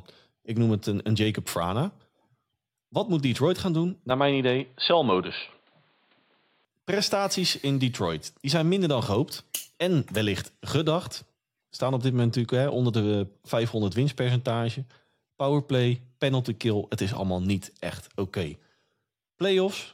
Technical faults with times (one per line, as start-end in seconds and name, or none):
4.11-6.65 input switched to a poorer device